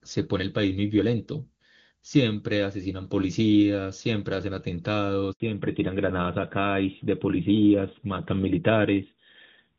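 At 5.32 s the speech dies away and stays silent for 80 ms, until 5.40 s. This is a handover gap: the call was passed from one network link to another, no speech frames arrived during the switch, and whatever was said in that instant is lost. From 5.40 s to the end the speech sounds duller and rougher, with nothing above 4 kHz. That is a fallback to narrowband. Before the drop, the clear, wideband sound fits AMR-WB HD Voice at around 23.85 kbit/s. After the handover, the call continued on an older narrowband codec, whose character fits AMR-NB at 12.2 kbit/s and which cannot carry the upper band.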